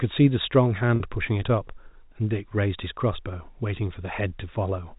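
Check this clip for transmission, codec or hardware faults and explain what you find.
One transmission fault appears, on a telephone-band G.711 path that cuts everything above 4 kHz. Packet loss with pitch repetition occurs from 0.96 to 1.00 s, where about 40 ms of audio is missing, which fits two lost 20 ms packets. The receiver bridged the gap by repeating the last pitch period, so instead of a hole the sound briefly holds and turns slightly buzzy. Unlike a plain dropout, there is no silence or click.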